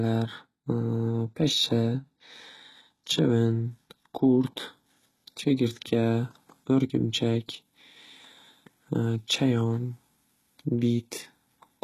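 Throughout the speech, the treble sounds synthetic and stops entirely above about 12.3 kHz, with s sounds turning gritty and lispy. That points to heavy HE-AAC compression, likely at a very low bitrate near 16 kbps, where spectral band replication rebuilds the upper bands from copied lower ones instead of coding them directly.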